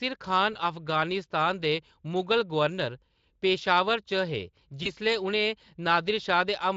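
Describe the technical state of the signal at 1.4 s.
At 1.4 s the speech is intact, with no fault, and only the light, steady character of the Speex coding it passes through.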